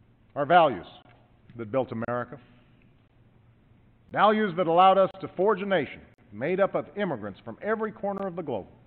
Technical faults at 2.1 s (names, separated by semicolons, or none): gap between stream segments